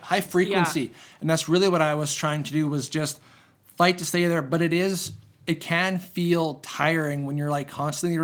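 No technical faults are audible anywhere in the speech recording.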